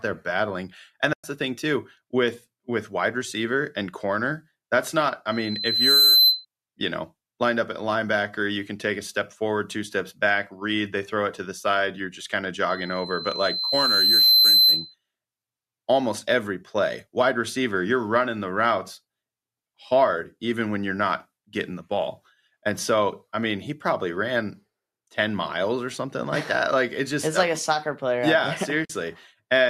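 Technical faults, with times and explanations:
1.13–1.24 s and 28.85–28.90 s: AAC frame loss with muting. Two short soft-edged gaps, about 110 ms and 50 ms, where lost frames were decoded as silence and the overlapping windows faded out and back in. The waveform shows a tapered dip to near silence and the spectrogram a blank vertical band.
5.31–6.45 s and 12.69–14.95 s: loudspeaker feedback squeal. A pure 4.1 kHz tone swells in over under a second in the first, and about one and a half seconds in the second, to roughly 10 dB above the speech, because the microphone-to-speaker loop gain exceeds one at that frequency. The spectrogram shows a bright horizontal line that thickens as it builds, and the waveform envelope grows steadily.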